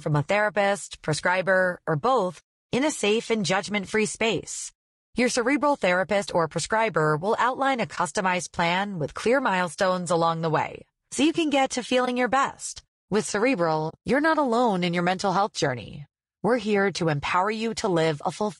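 Throughout the 19-second speech clip, the voice has a rough, grainy texture, with hiss filling the gaps between pitch harmonics and a top band that sounds thin and synthetic. This is low-delay AAC compression, likely AAC-ELD at a rate that fits around 32 kbps. At this low bitrate the bits run short across its roughly 500 frequency lines per frame. On a spectrogram, the harmonic lines look smeared, the space between them is speckled with noise, and the upper band looks patchy.

At 7.95 to 7.98 s, just before "plan with clear milestones", there is AAC frame loss with muting. A stretch of about 20 ms of coded audio never reached the decoder, so it zeroed that spectrum. The overlapping windows fade the sound down and back up, leaving a soft dip. The same fault occurs at 12.05 to 12.08 s, between "you can get to" and "your best". It occurs again at 13.89 to 13.95 s, where the hole is about 40 ms. 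The waveform shows a tapered gap at each point, and the spectrogram shows a narrow vertical blank across all frequencies.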